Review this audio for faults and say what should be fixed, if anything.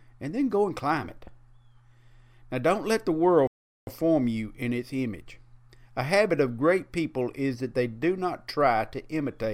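Speech falls silent from 3.47 to 3.87 s, then resumes, a playback stall likely caused by the player starving of data or its thread blocking. Give the player a deeper buffer and keep blocking work off its audio thread.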